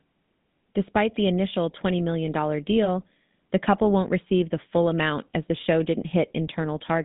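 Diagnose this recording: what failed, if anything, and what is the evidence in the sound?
The codec stage is at fault. Throughout the speech there is the buzzy, gravelly roughness typical of the GSM full-rate codec, and the band is confined to about 150 Hz to 3.7 kHz. A vocal-tract model driven by sparse, regularly spaced pulses causes this, which fits a 13 kbps stream.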